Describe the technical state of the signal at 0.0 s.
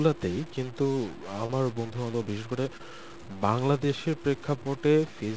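A stuck bit is present at 0.0 s and runs through the whole clip: one data bit likely held at a fixed value, offsetting many samples and filling pauses with noise.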